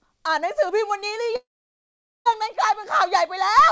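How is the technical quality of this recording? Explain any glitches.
One clear glitch interrupts the speech, heard through a call path whose sound stops at 8 kHz, which fits a wideband codec such as G.722. From 1.36 to 2.27 s, a long network dropout likely caused the gap: the last sound smears into a brief fading buzz or hiss, then about 0.8 s of silence, and speech resumes with roughly 0.9 s missing. Unlike a short packet-loss blip, the concealment gives up and content is skipped rather than patched.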